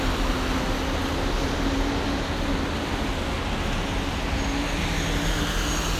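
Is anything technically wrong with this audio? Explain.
No, nothing technically wrong can be heard in this recording of sounds.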